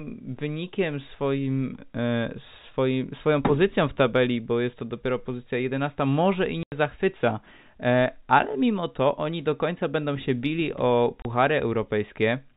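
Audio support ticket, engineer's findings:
Packet loss filled with silence: hard-edged dropouts at 6.63–6.72 s (90 ms) and 11.22–11.25 s (30 ms). Receiver plays silence for missing packets. Gap lengths fit 30 ms packets, three lost then one. G.711 telephone path, nothing above 4 kHz.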